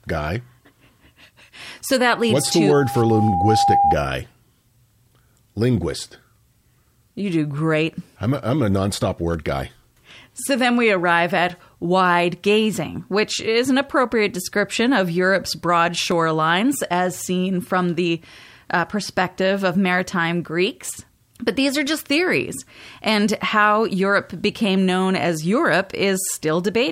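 Loudspeaker feedback squeal from 2.10 to 3.96 s: an 803 Hz tone swells over roughly a second and a half to about 5 dB above the speech, as the microphone-loudspeaker loop runs away at that frequency.

Single sharp clicks at 9.34 s (after "a I'm a nonstop"), 16.12 s and 20.45 s (after "uh perspective of maritime") are likely dropped samples: well under a millisecond missing, so the waveform jumps abruptly.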